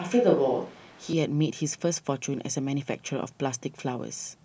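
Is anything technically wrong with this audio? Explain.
Yes. A switch to a distant microphone runs from the very start of the speech to about 1.13 s, where the pickup changes abruptly. The close microphone's signal was likely missing for this opening stretch, leaving a microphone set further back to carry the voice. Over that span the voice sounds roomy and hollow, with thinner bass and room noise sitting around 30 dB below the speech. The loudness stays about the same across the change back.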